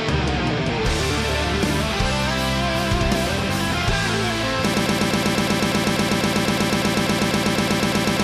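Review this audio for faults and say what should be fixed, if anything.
A broken-record loop starts at 4.74 s and runs to the end: a 0.12 s fragment repeats exactly, back to back, about 29 times, likely from a stalled player or stream resending its last buffer. Unlike echo, the repeats never decay, and the audio that should follow is lost. Fix it by detecting stalled buffers and outputting silence or resyncing rather than replaying held data.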